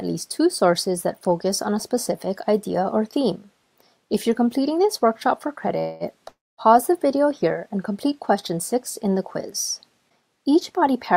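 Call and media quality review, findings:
Call audio freeze at 5.79–6.03 s and 6.28–6.61 s. Sound smears into a fading buzz, the second one dropping into a silent patch, then resumes with nothing lost. Likely jitter buffer underrun from held-up packets.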